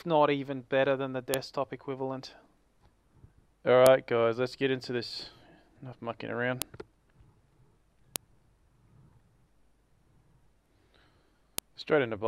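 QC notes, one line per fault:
1.34 s, 3.86 s, 6.62 s, 8.16 s and 11.58 s, file header played as audio: five sharp, loud clicks, each a split-second snap that cuts across whatever the sound is doing at that moment. Looks like separate WAV pieces were butted together without stripping their headers, so each piece's few dozen bytes of header data get read as sample values. That's raw garbage landing as a near-instant spike, which is why it snaps regardless of level or content.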